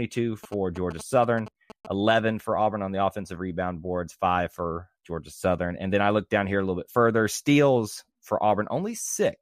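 Speech, with GSM signalling bursts from 0.44 to 1.87 s: galloping ticks and 217 Hz buzzes, about 15 dB down, from a nearby phone's radio getting rectified.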